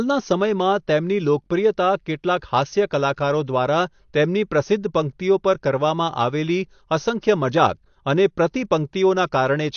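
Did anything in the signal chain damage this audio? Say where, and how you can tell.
Yes. The damage sits at the codec stage and runs through the whole clip. The speech has nothing above about 6.6 kHz, so it sounds dull, and sibilants and held vowels have a smeared, warbly, fizzy edge. That pattern is likely AAC compression at a low bitrate, something like 32 kbps AAC-LC. The encoder pulled its cut-off down and quantised the remaining bands coarsely against its hearing model, leaving gaps that come out as that swirly texture.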